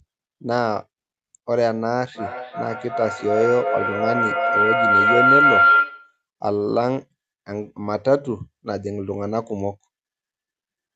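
From 2.15 to 6.22 s, a microphone and loudspeaker on the same call form a loop that adds level on every pass, producing a feedback howl. Each return grows instead of dying away and narrows onto the tone the loop favours, somewhere around 1.5 kHz. It swells to about 6 dB above the speech, pulsing roughly every 0.4 s with the loop's delay, and cuts off once the loop is broken. The howl sits within the call's 8 kHz audio band.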